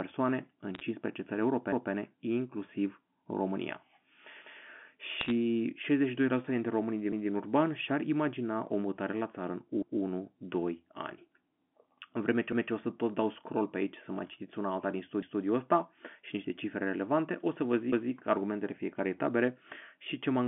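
Bit errors on a digital phone line crackle from 0.75 to 0.81 s and again from 5.21 to 5.31 s. Flipped bits corrupt single samples, giving sharp ticks. Overlapping chunks stutter at 1.72, 4.42, 7.12, 9.82, 12.52, 15.22 and 17.92 s, every 2.7 s. Each join replays 200 ms of speech, for example after "în vreme ce".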